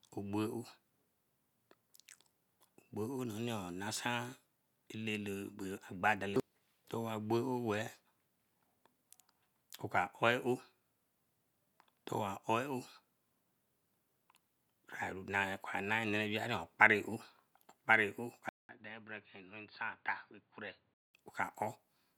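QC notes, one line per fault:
18.49–21.14 s, input switched to a poorer device: after a 200 ms gap, speech drops about 10 dB, loses everything above 4.7 kHz and gains new noise about 35 dB down, likely another microphone; unlike simple filtering, level, tone and noise change together.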